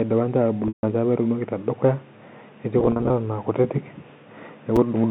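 At 0.68 s there is packet loss with pitch repetition: about 150 ms drops out in one run, and the receiver loops the last pitch period before fading it out, so the speech briefly hangs, fades to silence, and cross-fades back in by 0.83 s. On a spectrogram, the harmonics freeze into flat, evenly spaced lines that fade out, leaving a blank gap. Between 2.80 and 3.10 s the same fault recurs as 150 ms of scattered losses, the longest run only 40 ms. These gaps are too short to reach silence, so they come through as brief held, buzzy moments that show up as short, flat harmonic patches and repeating waveform cycles.

At 4.76 s, chunks out of order: a 5.8 ms slice of speech plays one chunk late, after the audio that should follow it. It is heard as a tiny jumbled flicker, and the waveform shows hard discontinuities at three joins. Throughout, the telephone-band G.711 coding shows as a spectrogram confined to about 150 Hz–3.7 kHz.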